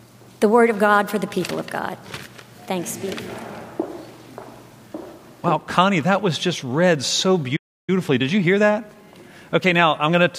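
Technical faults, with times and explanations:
7.56 to 7.90 s, playback stall: The sound stops in mid-flow and the output goes silent for about 317 ms. It then resumes. It likely means the player ran out of buffered data or its audio thread was briefly blocked. Nothing could be written to the output until it recovered.
7.90 to 10.30 s, time-compressed catch-up: Right after the stall, the audio runs hurried, at about 1.1 times normal speed, for roughly 2.4 s. The pitch stays where it was. The player is working off the backlog the stall built up. It cuts out small pieces of audio and cross-fades the remaining pieces together. The rushed pacing settles once the backlog is cleared.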